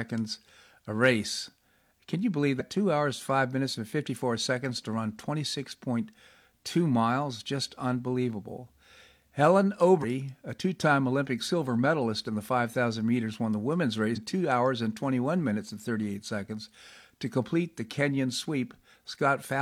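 A speech recording carries damaged data in a compressed stream, heard as brief garbled blips at 2.56–2.62 s, 9.99–10.05 s and 14.12–14.19 s. Corrupted bytes made the decoder misread frames and resynchronise.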